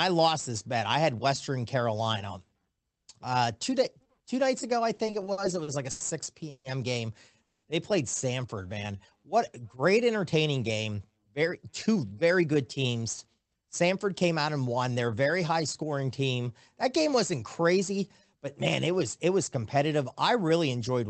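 Right after "two nights ago I", from 4.97 to 6.02 s, you get repeated stalls (stutter). Packets were arriving late, so the jitter buffer kept running dry and the receiver stretched the last bit of sound to cover each wait. There are eight little hitches adding up to 230 ms of filler, the longest 90 ms, which is about 22% of that stretch. Nothing is lost, but the speech catches and drags, like it's tripping over itself.

Then there are two call audio freezes, at 6.50 to 6.66 s and 7.42 to 7.65 s. In the first, the sound hangs as a smeared continuation for 140 ms, with the last 60 ms gone silent. The second is a flat 210 ms of silence. The speech then picks up exactly where it stopped, so those gaps are inserted rather than cutting anything out. The likely cause is packets held up in transit, leaving the buffer empty until they arrived.

From 8.62 to 8.98 s, just before "what great entertaining", there's a jitter buffer slow-down. 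The buffer was low, so the receiver padded it by repeating single pitch periods or bits of pauses, adding 62 ms. Playback drops to 85% speed with the pitch unchanged, so that bit sounds drawn out.

Two jitter buffer speed-ups follow, where the buffer held more than it wanted and trimmed tiny pitch-period slices to catch up. The first runs from 10.87 to 14.44 s, after "what great entertaining" and up to "and won". It's at 108% speed and drops around 0.3 s in total, so it sounds noticeably hurried at normal pitch. The second, from 17.73 to 18.37 s, is milder at 105%, losing only a few tens of milliseconds, and comes across as a slight rush.

Underneath all of this the Opus call path is working normally. You can hear its usual coding noise, a top end that stops at 8 kHz, and a sound that fits a bitrate of roughly 24 kbps.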